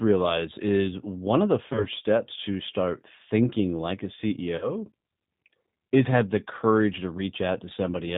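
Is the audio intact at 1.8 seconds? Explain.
No. Between 1.73 and 1.87 s, right after "is one of the" and before "steps to start thinking", there's VoIP packet loss concealed by the speech codec. The gap sounds like roughly two lost 10 ms frames. The decoder filled it by stretching its last pitch and filter into a fading smear, and the voice stays weak for a bit after packets return.

Underneath all that, the whole clip carries plainly audible G.729 codec coloring, consistent with an 8 kbit/s G.729A stream. Speech is rebuilt from a vocal tract model and a few pulses per frame, so nothing above 4 kHz survives and everything sounds slightly rough and synthetic.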